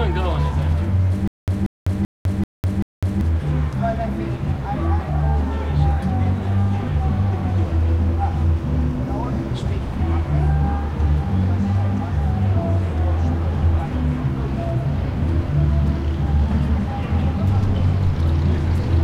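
From 1.28 s to 3.21 s the audio falls into a stutter with silent gaps. A 185 ms fragment plays, then about 202 ms of dead digital silence follows, and the pair repeats on a steady 387 ms cycle, five times in all. The likely cause is a stalled player or stream that replayed its last buffered chunk at each retry and then ran dry. Whatever should have sounded across that span never arrives.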